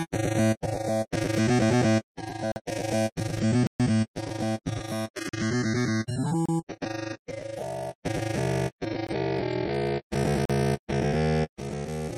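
Blocks of digital silence cut in at 2.52–2.56, 3.67–3.80, 5.29–5.33, 6.46–6.49, 9.07–9.09 and 10.45–10.50 s, each a hard drop to silence. The repeated 43 ms holes fit a 2048-sample buffer left unfilled in time.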